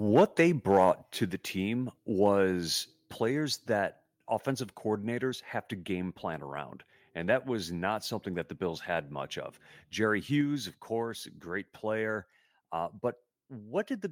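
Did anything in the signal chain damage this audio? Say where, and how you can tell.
Yes. The damage starts at the input, before any processing. There are two bursts of microphone overload, from 0.15 to 0.22 s and from 0.7 to 0.9 s, just before "to the team." The loudest peaks sound flattened and crackly, with a harsh buzzy edge. The first burst runs about 5 dB past full scale, and a fair share of its samples are cut off. The second runs about 3 dB over, with fewer samples cut. The likely cause is a microphone input set too hot, so the converter ran out of headroom and sheared the tops off the waveform.

Right after that, at 1.02 s, just before "to the team," the microphone volume is stepped down. The voice and the background both fall by about 4 dB at once, with no gradual fade. That single abrupt drop straight after a distorted peak points to call processing. The software likely detected the clipping and cut the device's input volume in one step to stop it.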